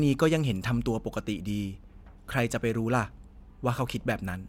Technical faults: none

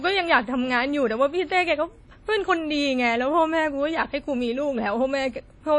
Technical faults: WMA compression

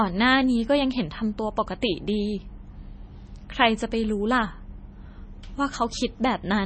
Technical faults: MP3 compression

